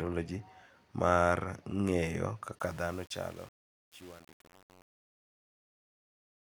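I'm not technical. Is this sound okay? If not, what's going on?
No. Truncation distortion on a fade runs from 2.59 s to the end of the clip. As the speech fades out, the volume control keeps too few loudness steps, so the quiet tail turns gritty.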